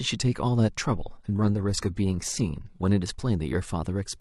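A speech clip in which an adaptive stream drops to a lower bitrate from 0.87 s to 2.87 s, a two-second stretch where the treble thins and takes on a synthetic, swirly sheen before full quality snaps back. The switch is abrupt in both directions with no gap or silence, which separates it from a dropout or buffering stall. The band-replicated top end fits a shift from a mid-rate AAC stream to a low-rate HE-AAC one.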